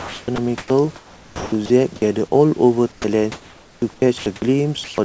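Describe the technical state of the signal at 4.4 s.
At 4.4 s the signal sits at the tail of a stretch of sound chopped by the voice detector, running from about 3.80 to 4.42 s. The sender's voice activity detection likely toggled on and off here, so roughly 160 ms of quiet speech edges were dropped and filled with comfort noise. The speech sounds clipped and choppy.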